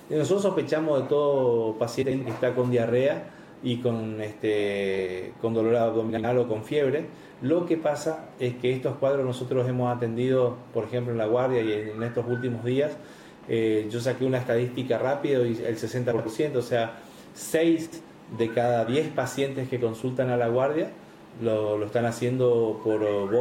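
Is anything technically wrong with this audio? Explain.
Yes. There are four instances of frames out of order, at 2.02 to 2.22 s, 6.09 to 6.25 s, 16.11 to 16.26 s, and 17.85 to 18.01 s. In each, two adjacent blocks were decoded in swapped order: about 93 ms each in the first, about 70 ms each in the others, consistent with runs of three or four frames. The swapped halves produce a brief garbled flutter. Unlike a dropout or skip, nothing goes missing and the timing stays intact.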